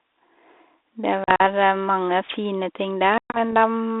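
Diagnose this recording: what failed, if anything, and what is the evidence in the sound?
Packet loss on an ADPCM call, at the network stage: hard-edged silent holes at 1.24–1.41 s (80 ms lost, runs up to 40 ms) and 3.18–3.52 s (140 ms lost, longest run 120 ms). The G.726 decoder's predictor and step size lose sync, so speech resumes slightly distorted, then settles.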